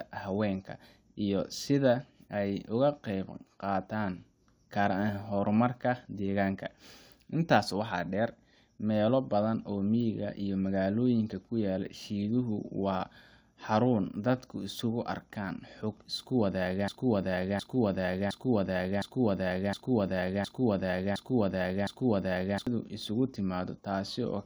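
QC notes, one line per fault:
16.88–22.67 s broken-record loop: one 0.71 s fragment repeats identically eight times, without an echo's decay, replacing the speech; likely a stalled player resending it.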